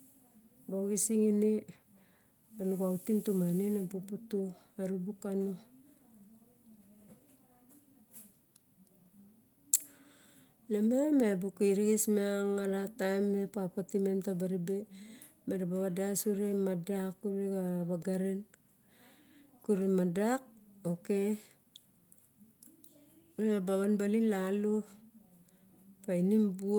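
No technical faults can be heard anywhere in this speech recording. Nothing in the audio calls for a time mark or further comment.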